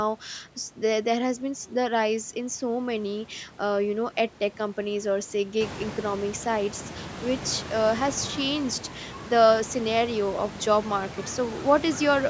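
No technical faults: the speech passes through call microphone processing with nothing above 8 kHz, and the room noise rises by about 14 dB at roughly five and a half seconds yet stays about 14 dB below the speech.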